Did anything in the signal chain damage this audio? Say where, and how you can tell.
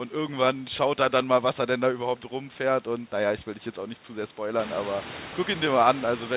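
No, nothing damaged this audio.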